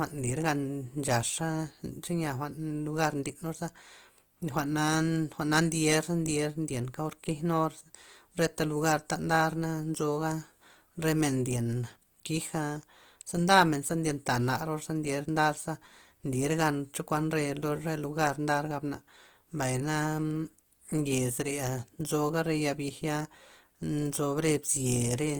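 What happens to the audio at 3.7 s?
At 3.7 s the speech carries the same damage it has throughout: a grainy, rough texture with noise filling the upper bands, not the swirling holes of MP3. Bandwidth stays full, near 20 kHz, pointing to roughly 24 kbps Opus compression in its music mode as the likely cause.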